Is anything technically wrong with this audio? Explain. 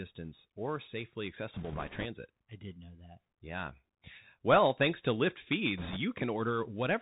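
Yes. The whole recording has the narrow, boxed-in sound of a Bluetooth CVSD headset codec: nothing reaches above 4 kHz, s sounds come out scratchy, a fine granular hiss sits beneath the speech, and loud bright moments distort, with the damage plainly audible. CVSD codes each sample as a single up-or-down bit at 64 kbps with an adapting step size, so fast, loud high-frequency movement outruns the step and the band is capped for telephone-grade voice.

Two stretches add bit errors on a Bluetooth voice link, from 1.54 to 2.06 s and from 5.78 to 5.98 s. Both bring a rushing, crackly noise over the speech rather than sharp clicks, and the second burst, with an error rate of about 5 percent against about 3 percent in the first, sounds rougher. Because no CVSD bit outweighs the others, flipped bits cause brief wobbles that fade quickly instead of loud pops.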